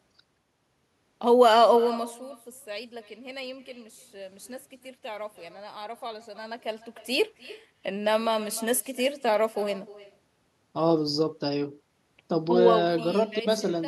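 Throughout, the speech carries an echo with no canceller. A quieter, thinner copy, about 19 dB down, trails each phrase by roughly a third of a second.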